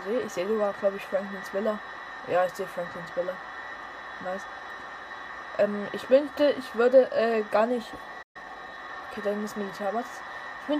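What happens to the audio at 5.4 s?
Nothing goes wrong at 5.4 s; the audio plays through that moment intact, with no dropout, click or other fault.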